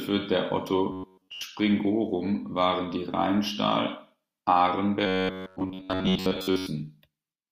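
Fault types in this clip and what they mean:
Robotic sound from repeated short buffers: at 0.92–1.43 s and 5.07–6.67 s the speech becomes a rigid metallic buzz locked at 93.8 Hz, likely an 11 ms fragment replayed to cover late audio. Unlike dropouts, nothing goes silent; most of the signal is replaced.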